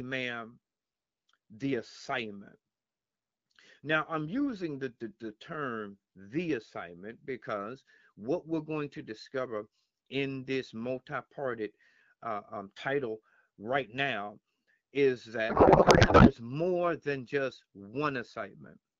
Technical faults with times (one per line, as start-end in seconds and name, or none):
15.49-16.32 codec payload misread